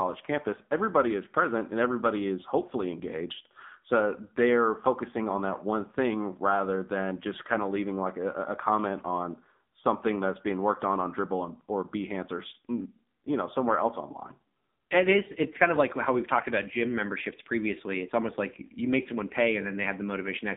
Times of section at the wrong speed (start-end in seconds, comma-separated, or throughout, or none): none